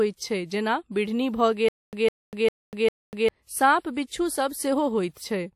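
A speech clip with a stutter with silent gaps from 1.69 to 3.29 s: a 157 ms fragment repeats four times, each followed by about 244 ms of digital silence, every 400 ms. The likely cause is a stalling player retrying its last buffer. The dead gaps and lost audio distinguish it from a seamless repeating loop.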